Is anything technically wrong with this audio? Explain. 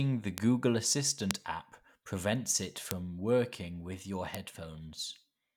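Yes. Four bit error spikes occur at 0.38, 1.31 (just before "app prevents it"), 2.91 (just before "working with your") and 4.35 s. A flipped bit makes one to three samples jump to about -12 or -6 dBFS, heard as isolated broadband ticks.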